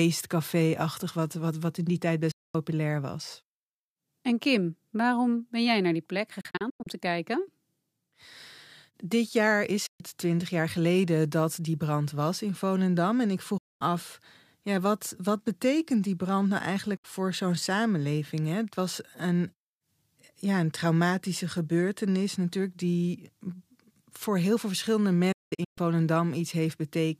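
Digital broadcast dropout occurs six times: the receiver lost valid frames and muted, with an 8 ms fade, until good data returned. At 2.31 s a 224 ms hole opens. At 6.41 s the loss is scattered over 448 ms, the longest gap 96 ms. After "jaar is" at 9.86 s, 128 ms vanish before "twintig jaar geleden dat". At 13.58 s, 224 ms go. After "betekent die brand nou" at 16.97 s, a 64 ms gap precedes "voor zo'n samenleving". After "voor heel veel verschillende" at 25.32 s, 352 ms are lost in stutters across 448 ms, the longest 192 ms.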